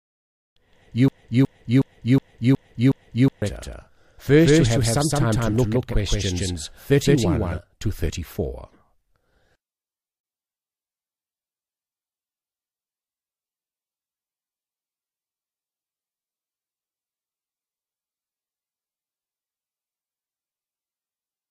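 A second copy of the audio, most likely picked up again by a slower capture path or left in by an edit holding two copies out of step, is already running when the clip begins and lasts until 7.58 s. This doubled audio track trails the original by around 150 ms at roughly the same level. It is a dry, full-band repeat with no decay or room colour, so the sound has a hard slapback doubling, and it stops abruptly at 7.58 s.

From 1.08 s to 3.42 s, overlapping that doubling, the stream likely stalled and kept resending the last fragment it held, which produces a broken-record loop. A piece 0.37 s long plays six times back to back as an exact, mechanical stutter. Whatever should have been heard in those 2.3 seconds is gone. Because the doubled copy is still present during this stretch, each repeat also carries its own delayed echo.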